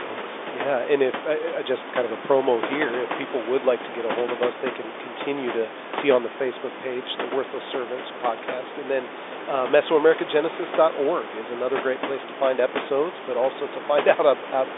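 No technical faults are audible.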